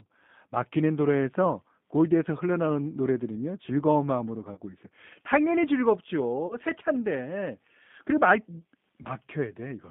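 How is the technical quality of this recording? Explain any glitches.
Pretty rough, honestly: the speech is squeezed through a G.729 codec the whole way, with three short dropouts on top.

The G.729 coding is clearly audible. The line runs roughly 150 Hz to 3.6 kHz, and rebuilding the voice from a filter and a few pulses at 8 kbit/s leaves it rough and a bit synthetic.

VoIP packet loss concealed by the speech codec hits at 4.54–4.61 s, 6.47–6.56 s and 9.02–9.08 s. Each gap is about 30 ms, which fits a single lost packet. The decoder stretches the last sound into a fading buzzy tone or coloured noise, and the voice stays weak briefly afterwards.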